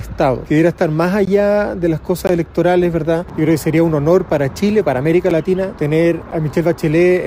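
At 1.25, 2.27, 3.29, 4.30, 5.30 and 6.31 s there's a gap between stream segments. The 1-second segments' timestamps don't quite meet, so the player drops in hard-edged silences of roughly 6 to 19 ms.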